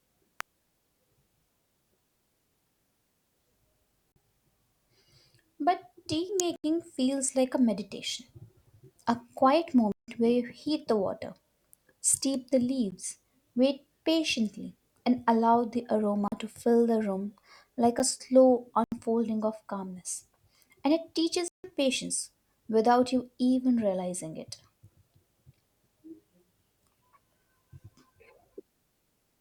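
At 0.41 s a sharp snap sits on top of the speech, and another comes at 6.40 s. Both are electrical switching spikes, likely a nearby switch or discharge arcing into the line. The speech carries on beneath each one, which sets them apart from a dropout.

Between them, and continuing after, come blocks of digital silence at 4.12 s (40 ms), 6.56 s (80 ms), 9.92 s (160 ms), 12.91 s, 16.28 s (40 ms), 17.99 s, 18.84 s (80 ms) and 21.48 s (160 ms). Here the output buffer likely went unfilled and the audio drops out with no fade. The shortest gaps tick, and the longest leave short holes.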